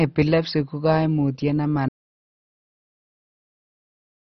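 From the start, the speech sounds dull and gurgling, with a granular roughness and nothing at all above about 6.1 kHz. This points to heavy MP2 compression, likely at a rate near 32 kbps: with so few bits available, the encoder shuts off whole upper sub-bands and quantises the remaining ones coarsely. Bands flicker in and out, which produces the watery, smeared texture of low-rate digital radio.

At 1.89 s the audio drops out to silence and stays silent to the end of the clip. The cut is abrupt and lands in mid-flow. The gap that follows is silent, with no room tone or background of any kind. The sound is consistent with the input being lost, likely through a disconnected device, a failed link or a stray mute, while recording carried on writing silence.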